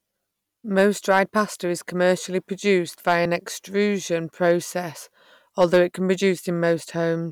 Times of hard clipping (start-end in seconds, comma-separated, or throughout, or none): 0.79-1.40, 3.08-3.17, 5.61-5.80